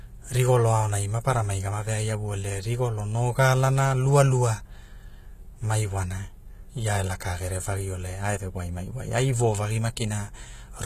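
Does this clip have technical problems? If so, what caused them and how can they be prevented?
Yes. Throughout the speech, s sounds come out gritty and lispy, with nothing above 14.9 kHz, which points to HE-AAC compression at a rate around 20 kbps as the likely cause. Unlike plain low-bitrate coding, which dulls the treble, this treble stays bright but is rebuilt by copying lower bands upward, so its harmonics don't line up. Encoding at a higher bitrate, or with standard AAC rather than band replication, prevents it.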